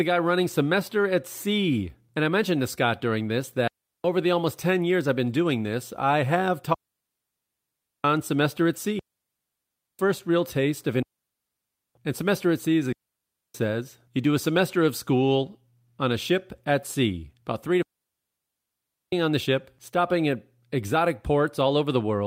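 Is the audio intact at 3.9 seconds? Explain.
No. A digital wireless dropout runs from 3.68 to 4.04 s: the receiver loses too much of the link's data and mutes for about 0.37 s behind a very short fade. The speech gives way to a clean hole of near silence. No hiss or crackle comes before or after it, which sets it apart from an analogue radio dropout.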